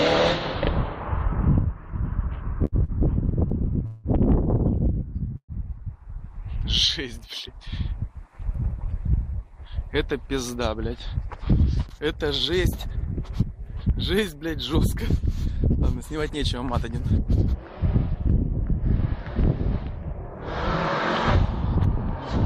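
The audio stutters between 2.65 and 4.07 s, repeated stalls where the jitter buffer ran dry four times; on a spectrogram, smeared held frames up to 181 ms long fill about 22% of that span. At 5.37 to 5.52 s a 118 ms call audio freeze appears, a held, fading sound ending in 60 ms of silence, a flat gap on the waveform, likely from packets delayed in transit. From 7.48 to 8.94 s a jitter buffer speed-up trims roughly 70 ms of pitch periods, so the sound runs about 5% fast at unchanged pitch, with compressed spacing visible on the waveform.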